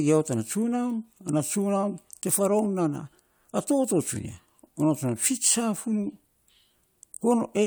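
No technical faults can be heard in this recording.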